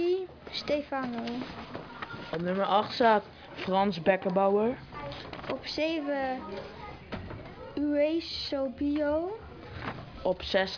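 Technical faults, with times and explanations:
No technical faults can be heard anywhere in the audio. There is nothing to time or explain.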